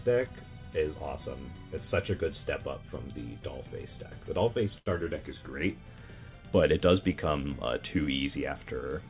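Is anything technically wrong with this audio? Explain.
Yes, there is one fault. A short stall from a late packet occurs at 4.78 to 4.88 s: a packet arrived late, the jitter buffer ran dry, and the receiver held the last sound for about 81 ms before resuming where it left off. Nothing is lost, but that moment sounds briefly frozen and drawn out with a faint buzz or dip, and everything after it plays about 81 ms later. The call path's band limit, with nothing above 4 kHz, fits a G.711 A-law codec.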